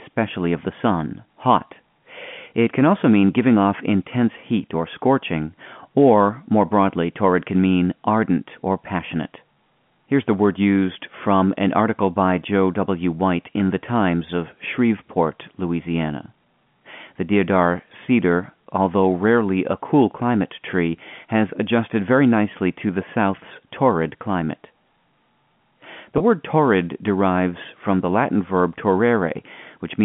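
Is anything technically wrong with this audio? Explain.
Yes. Packet loss with pitch repetition at 26.18–26.20 s, just before "word torrid derives from": the receiver repeated the last pitch period across a 20 ms gap, producing a brief buzzy hold.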